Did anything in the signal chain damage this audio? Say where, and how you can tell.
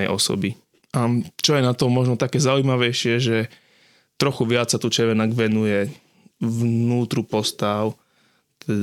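No, nothing along the chain seems to have touched this speech recording; I can't hear any stage leaving a mark on it.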